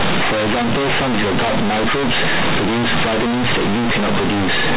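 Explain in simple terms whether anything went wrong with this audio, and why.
Something did go wrong, and it lasts the whole clip. The fault is companded audio read as linear. The speech was stored as mu-law telephone audio, which squeezes loud and quiet sounds onto a curved scale. On playback, those values were taken as ordinary 8-bit samples and never expanded back. Soft sounds jump almost as loud as strong ones. Every swing of the wave gets bent. The speech comes out harsh and buzzy, and the pauses fill with loud noise.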